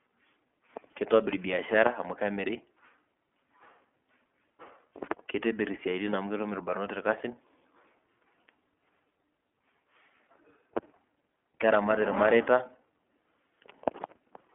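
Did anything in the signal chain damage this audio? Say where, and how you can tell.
Yes, at the codec stage, throughout. It is iLBC coding. Nothing passes above 3.6 kHz, and independently coded 30 ms frames leave the speech plainly rough and synthetic.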